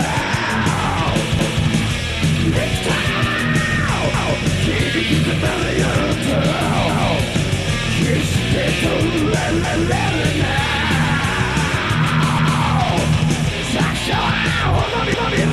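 Overlapping chunks at 1.39, 4.14, 6.89, 9.64, 12.39 and 15.14 s: each 2.5 s chunk starts early, so 250 ms plays twice as a regular stutter.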